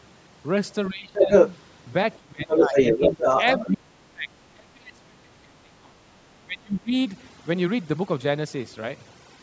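Overdone noise removal runs through the whole clip. The background sits near silent with twinkling specks. Quiet parts of the speech were stripped along with the noise.

From 0.9 to 1.3 s the speech dips by around 15 dB. This is speech suppressed in double talk. The echo canceller likely turned down both sides while they overlapped. From 1.14 to 1.58 s the other side's voice leaks through. The canceller likely left some loudspeaker echo in the microphone signal.

From 2.17 to 2.76 s the speech drops again, deeper this time, by around 25 dB. From 2.48 to 3.77 s the other side's voice comes through again, longer and more clearly.

From 3.59 to 5.98 s comes the longest suppression. The speech sinks by around 30 dB over about two seconds. From 6.44 to 6.94 s a final dip reaches around 30 dB.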